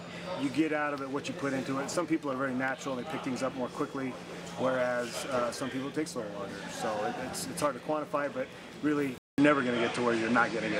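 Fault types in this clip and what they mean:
Input switched to a poorer device: likely cause of the change at 9.18 s, after a 200 ms gap. The sound then cuts off above 9.8 kHz, shifts level by about 5 dB, and gains a new noise floor.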